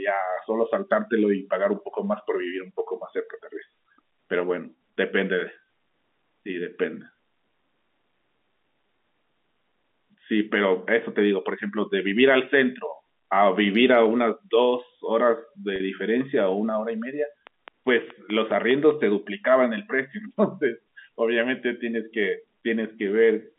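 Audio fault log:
15.76 to 15.80 s, packet loss with pitch repetition: a 40 ms gap, which fits two lost 20 ms packets, gets patched by the receiver looping the last pitch period it heard and fading it out. Because the hole is short, you don't get a dropout. It comes across as a brief held, slightly buzzy tone where the sound momentarily freezes on one cycle, then the real signal picks back up.
17.47 to 18.92 s, train of clicks: roughly seven sharp, near-identical ticks at a steady rate of about 4.9 per second, peaking around 10 dB above the signal, so they stand out clearly. They keep their even spacing regardless of what the audio is doing and sit on top of it as a regular popping. That evenly paced, same-shaped pattern likely comes from electrical interference from nearby equipment or a faulty connection or power supply injecting pulses into the path.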